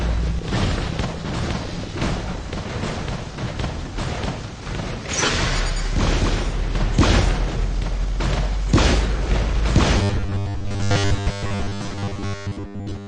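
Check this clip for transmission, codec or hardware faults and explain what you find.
One fault is present, running to the end of the clip. Robotic sound from repeated short buffers, 9.98 to 13.08 s: the audio becomes a rigid, metallic buzz at a fixed 100 Hz that only loosely follows the original. The likely cause is new data arriving too seldom, so playback keeps repeating a 10 ms stretch, which fits a buffer of that length. This happens for roughly two thirds of the section, while the real audio in between is skipped.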